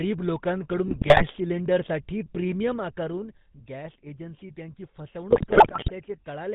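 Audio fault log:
throughout: GSM full-rate codec. There's a buzzy, gravelly roughness over all of it, plainly audible, and nothing comes through above 4 kHz. The codec models the vocal tract and drives it with a thinned-out pulse train, which fits the 13 kbps full-rate coder.
0.88–1.25 s and 5.30–6.02 s: GSM bit errors. In both stretches the sound breaks into squawks, pops and gargling. Corrupted bits reached the decoder, so the filter, pitch and gain values came out wrong frame by frame. The second, longer burst has the higher error rate, 4.87% against 3.66%.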